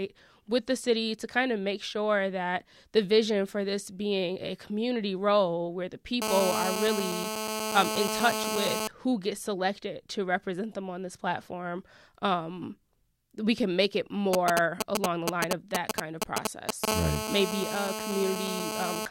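From 6.22 to 8.88 s, between "community role where the" and "who gets selected to", a GSM phone buzz appears. The circuit rectifies a nearby handset's 217 Hz call bursts into a harsh, harmonic-rich rasp about 2 dB below the speech. At 14.33 s, after "we can make it", GSM signalling bursts gallop in as ticks and brief 217 Hz buzzes, louder than the speech, until 16.85 s. The steady buzz returns from 16.88 to 19.06 s, about 4 dB below the speech.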